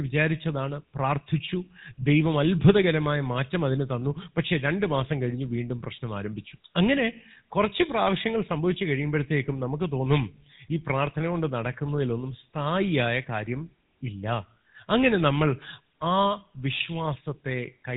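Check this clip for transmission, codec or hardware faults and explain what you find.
There's one fault, and it runs the whole clip: GSM full-rate codec damage, and it's plainly audible. The codec models the vocal tract and excites it with a sparse regular pulse train, and nothing gets through above 4 kHz, so the speech comes out buzzy and gravelly with a dull, band-limited top.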